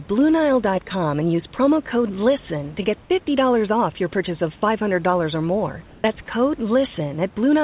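Comfort noise in place of the background runs from 5.88 to 6.04 s. For those 160 ms the room's own hiss, sitting about 29 dB under the speech, gives way to a flat, textureless noise roughly 2 dB quieter. This is likely discontinuous transmission: the sender heard no speech, stopped sending audio, and the receiver filled the gap with synthetic noise matched only loosely to the background, so the natural detail of the room briefly goes smooth and dull.

Sound dropped by the voice detector occurs at 6.26 s. About 10 ms of real sound vanishes inside a 20 ms stretch of steady synthetic noise, heard as a tiny clipped gap where the signal thins out and snaps back. The likely cause is the sender's voice detector mistaking a quiet fragment for background and pausing transmission until it triggered again. All of this sits within narrowband audio with nothing above 4 kHz, consistent with a G.711 call codec.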